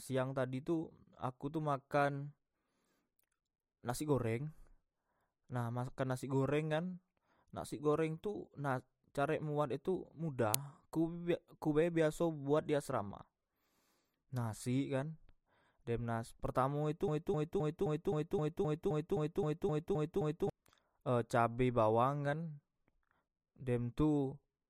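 Speech, with two clear problems. At 10.54 s there's an uninitialised buffer: a loud crack under 3 ms long, where leftover memory got played as samples before real audio was written in. Its length fits a 128-sample buffer. Then from 17.08 s to 20.50 s you get a broken-record loop, with a 261 ms fragment repeating back to back about 13 times while the speech that belonged there is simply gone. The likely cause is a stalled player or stream that kept resending the last chunk it held.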